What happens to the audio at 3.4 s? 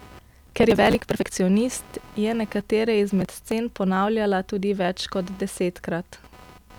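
Processor overload crackle runs from 3.21 to 3.51 s, starting just after "je nekatere" and clearing before "ponavljala tudi več". The processor falls behind and misses a long string of audio deadlines. Each missed buffer is skipped, leaving a small hard-edged gap. The spacing suggests blocks of roughly 10 ms, with something like twenty dropped in a row. Together the gaps form a gritty, tearing crackle over the speech that stops once the load eases.

Computer activity noise is also present at this moment, as it is through the whole clip. Load changes in the computer disturb the audio circuit's shared ground. This produces a buzzing pulse near 300 Hz, sitting around 30 dB below the speech, that follows the machine's activity rather than the sound itself.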